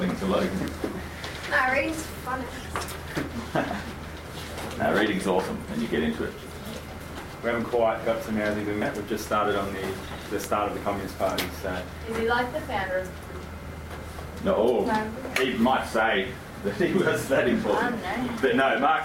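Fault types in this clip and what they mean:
Electrical switching spike: two sharp snaps sitting on top of the sound, at 0.68 and 10.44 s, most likely a nearby switch or static discharge arcing into the line.
Damaged data in a compressed stream: corrupted bytes knock the decoder out of sync, giving brief blips at 8.82 and 13.30 s while it hunts for the next frame.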